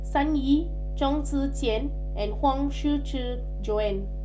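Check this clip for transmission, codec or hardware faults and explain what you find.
Mains hum runs through the whole speech clip: a steady 50 Hz tone with low harmonics, loud relative to the speech, from a ground loop or nearby transformer coupling power-line current into the signal.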